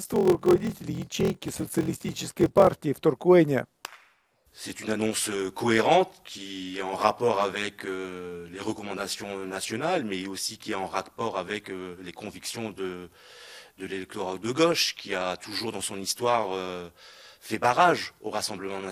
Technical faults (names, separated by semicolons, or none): block size mismatch (padded)